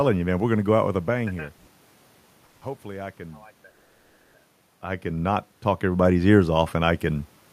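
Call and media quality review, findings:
Call audio freeze at 1.57 s, 2.45 s and 3.69 to 4.37 s: last sound stretched into a fading buzz for 0.1 s, 0.16 s and 0.65 s, then resumes intact. Likely jitter buffer underrun from late packets. Content delayed, not lost, unlike a dropout.

Automatic gain rising from 4.82 s to the end: voice and room noise swell together after input fell by about 13 dB. AGC gain ramp. Background rising with the voice separates it from a talker moving closer.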